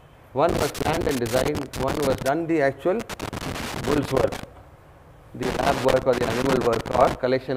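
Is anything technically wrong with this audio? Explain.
Yes. Loose connector crackle appears at 0.49 to 2.29 s, 3.00 to 4.44 s, and 5.43 to 7.15 s. A worn or dirty contact keeps making and breaking, chopping the signal into irregular bursts of scratchy crackle in each stretch.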